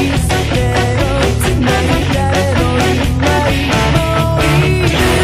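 Brief glitches at 0.29–0.31 s, 2.01–2.03 s and 4.89–4.91 s are damaged data in a compressed stream: the decoder misreads the frames and loses sync.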